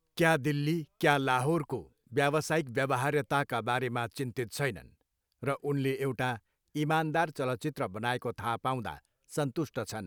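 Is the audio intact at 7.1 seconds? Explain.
Yes, the speech is intact at 7.1 seconds, with no dropout, glitch or other audible fault at that point.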